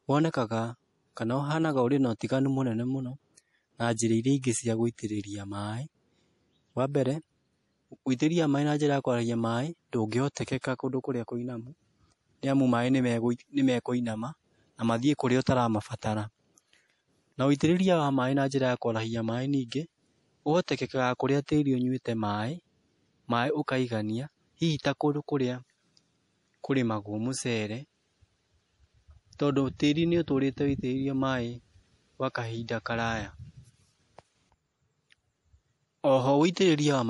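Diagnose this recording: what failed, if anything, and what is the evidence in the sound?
MP3 compression, throughout the speech, at the codec stage. Nothing is present above 11.4 kHz, a hard ceiling where the encoder dropped the treble, and the codec damage is plainly audible as a watery, swirling texture. This is likely a low-bitrate MP3, with the sound fitting roughly 48 kbps. Short of bits, the encoder zeroes weaker frequency lines, which flicker on and off between frames, and sacrifices the top band entirely.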